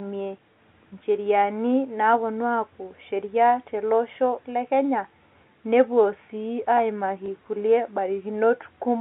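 At 7.26 to 7.28 s there's a short hitch from packet loss with the last packet repeated. About 20 ms of audio went missing, which sounds like a single lost 20 ms packet, and the receiver filled the gap by replaying the chunk it had just played. With only that one chunk repeated, you hear a small blip, all sitting inside the narrow 200 Hz to 3.6 kHz telephone band of the G.711 line.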